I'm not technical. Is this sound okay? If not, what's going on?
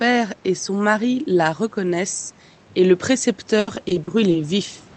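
No. From about 3.59 to 4.36 s there's repeated packet loss (robotic sound). Bits of the call audio went missing six times in quick succession, and the system papered over each gap by stretching the last sound, so it turns choppy.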